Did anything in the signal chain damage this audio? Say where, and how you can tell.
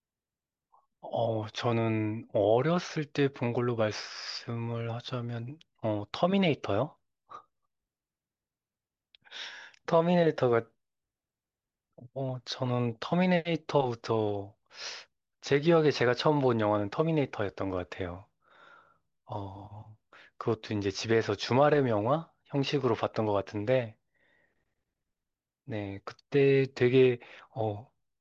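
No, nothing in the signal chain audibly damaged it.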